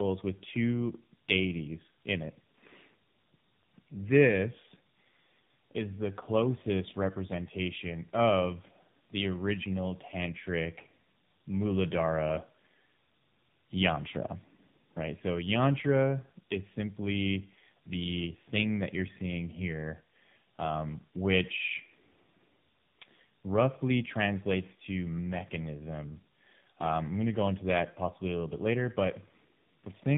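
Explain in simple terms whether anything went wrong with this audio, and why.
Tandem speech coding runs throughout: the speech was squeezed by a phone codec twice in a row, so it sounds rougher and more warbly than one pass, with nothing above 3.8 kHz.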